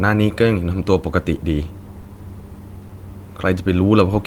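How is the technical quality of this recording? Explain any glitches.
The speech has two brief glitches. Both are short concealed packet loss, at 2.01 to 2.05 s and 2.87 to 2.91 s. About 20 ms arrived too late each time. The receiver extended the preceding sound, causing a brief smear or wobble.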